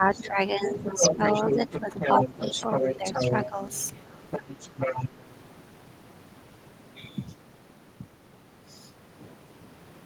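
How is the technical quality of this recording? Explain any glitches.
The recording has echo-cancellation trouble in its first five seconds, with two kinds of fault overlapping.

Speech suppressed in double talk: When both ends talked at once, the echo canceller likely could not tell the local talker from the loudspeaker echo and pulled down the whole microphone signal. From 0.0 to 2.23 s the speech dips by roughly 10 dB, for around a second and a half in total. From 2.65 to 3.6 s it dips again by about 10 dB, in short bites. A brief dip of about 5 dB follows at 5.09 to 5.19 s.

Other side's voice leaking through: The far end's voice, played over the talker's loudspeaker, was likely not fully removed from the microphone feed, so a second voice is audible. The first scrap, at 0.14 to 0.27 s, sits about 15 dB under the speech. From 0.63 to 4.0 s the leak is roughly as loud as the talker and competes directly with it. 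From 4.31 to 5.09 s it is only slightly quieter, at about 5 dB below.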